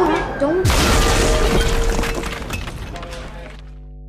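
From the first moment to the end, a steady low tone at 50 Hz runs under the sound. This is mains hum, where power-line current leaks into the signal path through a ground loop or a nearby transformer. It sits only about 15 dB below the wanted audio, so it is plainly audible as a constant drone. On a spectrogram it shows as an unbroken horizontal line at 50 Hz. On the waveform, quiet stretches show a regular 20 ms ripple.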